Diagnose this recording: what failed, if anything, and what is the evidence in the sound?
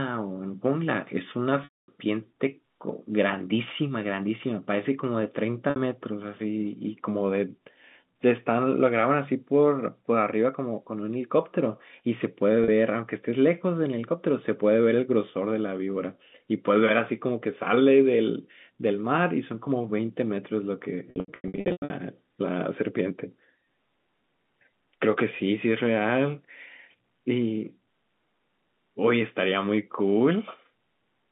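Short buzzy holds at 5.70 s and 12.64 s, a longer fade to silence at 1.64–1.88 s, and a choppy stretch from 21.1 to 21.9 s. This is network packet loss with pitch repetition: the receiver looped the last pitch period across each gap, fading it out on the longer losses.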